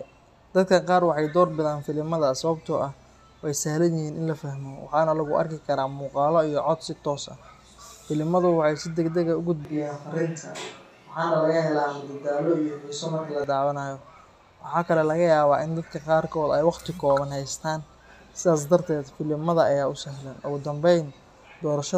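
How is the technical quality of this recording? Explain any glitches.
One glitch stands out. From 9.65 to 13.44 s the speech suddenly goes roomy and hollow, losing its low end, then snaps back just as abruptly. That's the signature of a switch to a distant microphone: the close mic's feed likely dropped out, so that stretch came from a mic further off, hearing more of the room's reflections than the talker's direct sound. The loudness hardly shifts, and background noise stays low, roughly 40 dB under the speech.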